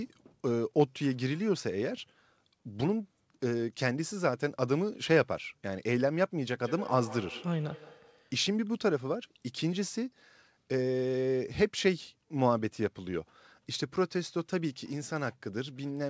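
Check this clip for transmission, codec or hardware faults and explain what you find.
One fault is audible, on a call path whose band stops at 8 kHz. Feedback echo between two devices runs from 6.65 to 8.34 s: a second device in the room replays the call and this microphone recaptures it, beyond its own echo canceller's reach. Speech returns roughly every 150 ms, thin and ringing, peaking about 14 dB below the direct speech.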